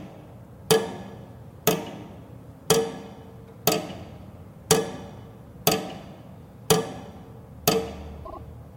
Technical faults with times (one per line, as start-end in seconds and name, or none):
8.24-8.39 repeated frames